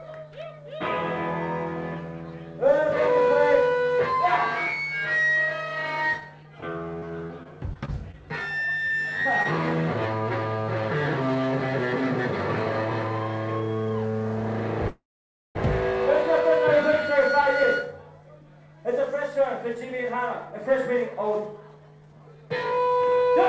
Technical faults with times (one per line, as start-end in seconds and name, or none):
6.20-8.15 repeated packet loss (robotic sound)
8.87-8.94 short stall from a late packet
9.43-9.46 short concealed packet loss
14.88-15.57 call audio freeze
19.75-23.32 jitter buffer speed-up